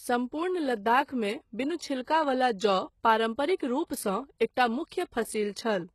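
From start to finish the speech carries plainly audible codec damage, likely HE-AAC compression. Nothing sits above about 12.4 kHz, and the treble below that cutoff doesn't sound like the real thing. It's rebuilt by spectral band replication, lower bands copied upward and shaped by a rough envelope, so harmonics don't line up across the crossover. The damage fits a low bitrate of around 16 kbps.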